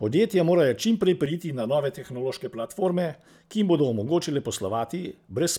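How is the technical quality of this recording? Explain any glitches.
One fault stands out. From 1.26 to 2.85 s, channel delay (comb filtering): one channel lags about 5 ms, so the mono sum cancels at regular notches from roughly 100 Hz, leaving the speech hollow and phasey.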